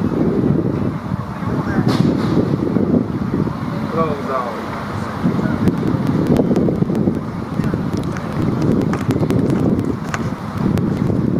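Periodic USB or driver dropouts from 5.58 to 11.27 s skip about two milliseconds every 0.098 s, giving a steady train of ticks wherever sound is present.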